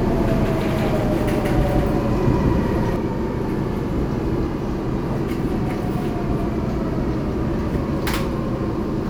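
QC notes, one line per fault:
0.00–2.96 s, doubled audio track: present from the first moment, a full-band copy trails the sound by around 200 ms at roughly equal level, dry with no decay, and stops abruptly at 2.96 s; likely a slower second capture path mixed in.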